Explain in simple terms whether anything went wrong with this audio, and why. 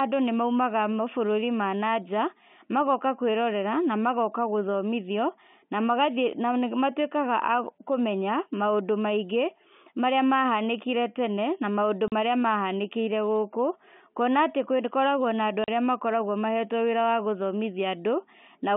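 Packet loss filled with silence breaks the speech twice, at 12.08 s just after "tene na maũndũ" and at 15.64 s. Each 40 ms hole, likely two lost packets, has hard edges.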